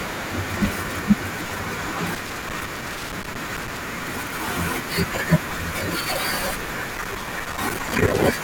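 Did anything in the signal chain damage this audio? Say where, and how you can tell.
Yes. Loose connector crackle in the analogue wiring damages the speech twice, from 2.15 to 3.77 s and again from 6.89 to 8.24 s. Each burst is irregular scratching and popping, as a worn or dirty contact makes and breaks while moving, chopping the signal and adding clicks from any DC on the line. Its random, clustered timing sets it apart from buffer faults, which often recur at a steady interval.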